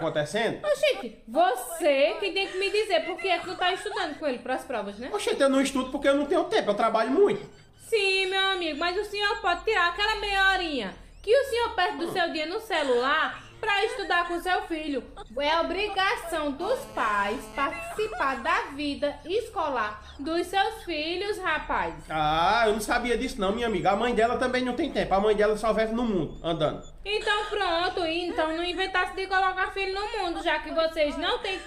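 From 16.61 to 17.65 s a hard, raspy buzz sits about 18 dB below the signal, pitched at 216.7 Hz and dense with harmonics. This is GSM phone buzz: a nearby 2G phone in a call transmits in bursts at that rate, and the audio circuitry rectifies the radio pulses into sound.

Immediately after, from 17.70 to 18.54 s, the buzz breaks into even ticks with a longer 216.7 Hz buzz twice a second, roughly 25 dB down. These are GSM signalling bursts. The phone's user has gone silent in the call, so it sends only short groups of bursts, and the audio circuitry again rectifies them.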